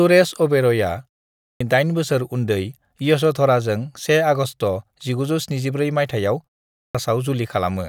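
At 1.34 s and 6.70 s, a clipped start after a pause: the waking output drops 0.26 s and 0.25 s, so speech bursts in with an abrupt, hard-edged waveform onset.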